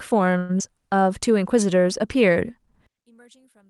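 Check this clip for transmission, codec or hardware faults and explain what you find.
Four faults turn up, all on the transmission or playback side, most of them bunched into the first second.

From 0.37 to 0.51 s there's a call audio freeze. Those 117 ms are filled with the last sound smeared on as a fading buzz, with no dead silence. It likely comes from packets stalling and the jitter buffer running dry. Nothing is lost, and speech resumes right where it stopped.

At 0.59 to 0.62 s playback does a skip ahead. Roughly 70 ms of speech is dropped, with only a tiny stitch of filler at the joint. Later audio was already queued, so the two sides get spliced almost directly and you hear an abrupt little jump.

Right after, from 0.68 to 1.05 s, comes a jitter buffer slow-down. The buffer was topping itself up by repeating single pitch periods, adding 41 ms. Speech runs at about 90% speed with unchanged pitch, so sounds come out a touch drawn-out.

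From 2.87 s to the end, one channel is inverted. The centred speech nearly vanishes, dropping by about 33 dB, with only a faint residue left. That's what you'd expect if one side's polarity is likely flipped, so the shared content cancels when the channels are summed to mono.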